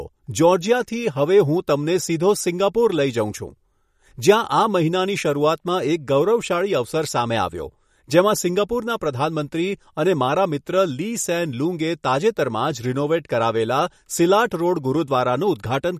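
Throughout the speech, the sound is watery and swirly, with chirpy sibilants and smeared attacks, likely from MP3 compression at a low bitrate around 48 kbps. A spectrogram shows a flat ceiling at 15.1 kHz and speckled, flickering gaps where weak frequency lines drop out.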